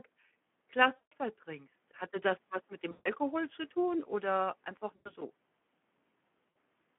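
A Speex codec running at a low setting, which fits a bitrate of around 11 kbps, leaves the excitation short of bits, so the speech throughout is hoarse, grainy and plainly degraded, confined to a narrow telephone band of roughly 150 Hz to 3.4 kHz.

VoIP packet loss concealed by the speech codec then hits four times. The decoder keeps replaying its last pitch and filter at falling gain. At 0.96 to 1.13 s, a 160 ms gap is smeared into a fading buzz or coloured noise. At 2.91 to 3.10 s, between "das was mit dem" and "zu tun oder einfach", a 140 ms gap does the same. After "zu tun oder einfach", a 100 ms gap falls at 4.95 to 5.12 s, and a 60 ms gap at 6.49 to 6.55 s. Each leaves the speech briefly weak after it ends.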